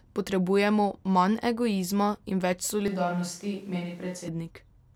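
At 2.88 s the speech suddenly goes roomy and hollow, thinner in the bass and about 5 dB quieter, with background noise coming up to around 30 dB below it. That's a switch to a distant microphone, likely after the close mic dropped out, and it snaps back at 4.28 s.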